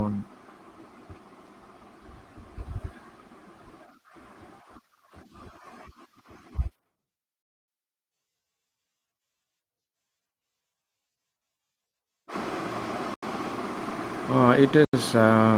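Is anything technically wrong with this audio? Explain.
Yes. Two blocks of digital silence appear, at 13.14 s and again at 14.85 s, each about 85 ms long, which fits a 4096-sample buffer that was never filled in time. The sound drops straight to silence and returns with no fade, so each gap is heard as a short hole rather than a tick. Unlike a lost Opus packet, which would be smoothed over with concealed, smeared sound, these gaps are dead silent.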